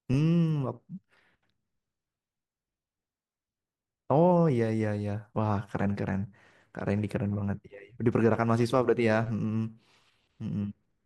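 Listening to the speech here, nothing stood out as a technical fault at any point.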